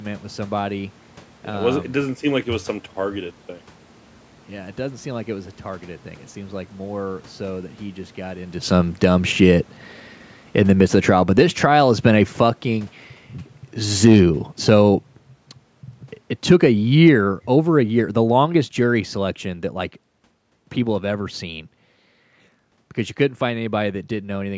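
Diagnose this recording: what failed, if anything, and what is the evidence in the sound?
Automatic gain falling in the call processing: from 10.43 to 19.45 s the level sinks by about 17 dB, and the room background drops with it, so the talker didn't move away.

Automatic gain rising, also in call processing: the level swells by about 6 dB at 11.29–12.27 s and about 3 dB at 14.12–15.12 s, with the background lifting alongside the voice.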